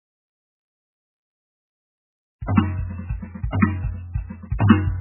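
Throughout the music, the treble stops dead at 3 kHz and the remaining band sounds watery and swirly as weak components flicker in and out, with attacks smeared. This is heavy MP3 compression, likely from an encoder starved of bits, consistent with a rate near 8 kbps.

At 2.46 to 2.48 s and again at 4.58 s, a short hiss arrives roughly 20 ms and 18 ms ahead of a sharp attack, which sounds soft. This is pre-echo: coding noise sized for the loud transient spreads across its whole block, filling the quiet just before it.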